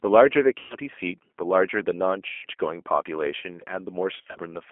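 The speech runs through the G.729 codec from start to finish, and the damage is plainly audible. Everything sits in a narrow telephone band of roughly 250 Hz to 3.4 kHz, and the sound is rough and slightly synthetic, which fits an 8 kbit/s stream rebuilt from a vocal tract filter and a few pulses per frame. Unlike plain band-limiting, the grain here comes from the speech being re-synthesised rather than simply filtered.

VoIP packet loss concealed by the speech codec occurs at 0.59 to 0.75 s and 2.29 to 2.46 s. In each gap the decoder keeps repeating its last pitch and filter while fading the level, so the sound smears into a fading tone or coloured noise rather than dropping to silence. The first gap covers about 110 ms, which points to around eleven lost 10 ms frames, and the second covers about 140 ms. Recovery is sluggish, with the level staying weak for a moment after each gap.

The third loss, from 4.15 to 4.39 s, is broken up differently. 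About 150 ms of audio goes missing, scattered over roughly 200 ms, and no single run lasts longer than 50 ms. The result is a stuttering series of short concealed patches rather than one sustained smear. A simple mute or dropout would leave hard gaps, whereas here each hole is filled with extrapolated, decaying sound.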